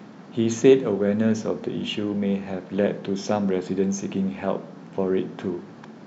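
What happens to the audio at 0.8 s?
At 0.8 s the speech runs on intact, with no dropout, click, distortion or other fault to be heard.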